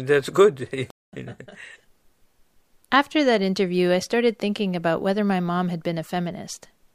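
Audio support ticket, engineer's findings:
Playback stall at 0.90 to 1.13 s in speech: output cuts out mid-flow for about 225 ms, then sound resumes. Waveform drops to a flat line and the spectrogram shows a blank vertical band across all frequencies. Likely cause: player buffer underrun or a blocked playback thread halting output until recovery.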